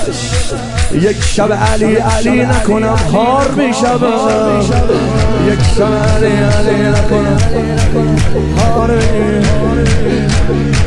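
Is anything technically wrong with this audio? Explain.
Yes. From 7.41 to 8.79 s there is a wrong sample rate fault. For that stretch the samples are played back faster than they were captured, with no conversion in between. The sound points to material recorded at about 22 kHz being clocked out at 24 kHz. Speed and pitch rise together, by about 1.09 times and roughly one and a half semitones. The section comes across slightly hurried and raised in pitch before returning to normal.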